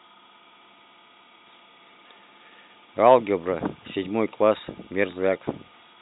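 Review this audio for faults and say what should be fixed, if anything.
Nothing in this audio needs to be fixed, because there are no faults to report.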